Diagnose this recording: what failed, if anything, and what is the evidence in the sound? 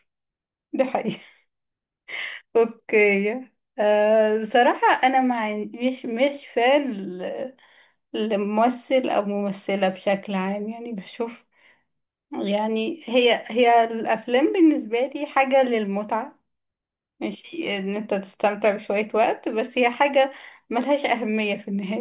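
Nothing failed; no fault is audible anywhere in this speech.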